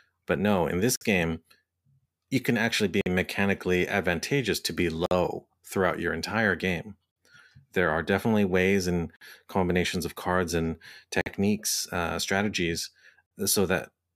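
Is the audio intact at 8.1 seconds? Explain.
Yes, the speech at 8.1 seconds plays through intact, with no dropout, glitch or other fault at that moment.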